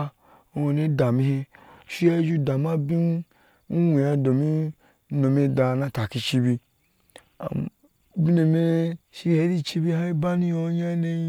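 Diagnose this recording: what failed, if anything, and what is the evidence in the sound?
Nothing in the recording points to a failure at any stage of the chain. The speech runs without any break or disturbance that would mark a fault in the signal path.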